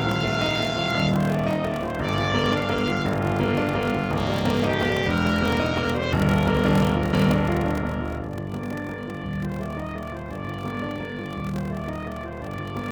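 Block size mismatch (padded) runs throughout: each block is topped up with silence, giving a 43.1 Hz buzz and slowing the audio to 0.861 times normal speed, which fits a 1024-sample read block. Compressed frames skipped at 4.79 s and 6.78 s: the audio jumps ahead by roughly 100 ms and 50 ms, about two 46.4 ms frames and then one.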